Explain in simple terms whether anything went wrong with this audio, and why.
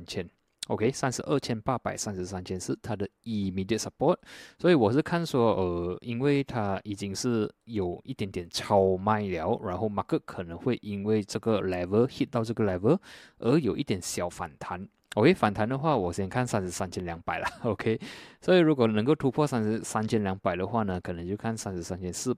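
Nothing went wrong; no faults can be heard.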